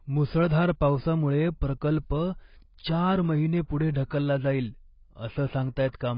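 Speech, carrying AAC compression damage from start to finish. Nothing is present above about 5 kHz, so the top of the spectrum is missing and the sound is dull throughout, with the coding damage heavy rather than subtle. The likely cause is AAC-LC encoding at a very low bitrate, one that fits roughly 16 kbps, where the encoder lowers its cut-off and starves the remaining frequency bands of bits.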